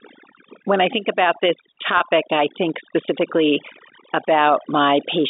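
From the start, overdone noise removal leaves the background near silent, with twinkling specks where single frequency bands flicker on and off. Quiet parts of the speech are pulled down with the noise, unlike plain band-limiting from the telephone line.

At 1.98 to 2.00 s, between "I think about this" and "I think specifically", a packet loss with pitch repetition bridges a 20 ms gap, which fits two lost 10 ms packets. The receiver repeats the last pitch period, giving a brief held, buzzy note rather than a click or a silent dropout.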